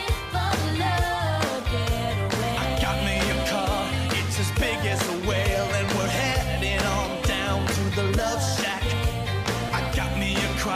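A brief noisy smear at 9.67 to 9.69 s, where about 15 ms of sound went missing from lost LE Audio frames, which fits two 7.5 ms frames. The decoder refilled the gap by repeating the last spectrum with scrambled signs. The light lossy compression stays faint underneath.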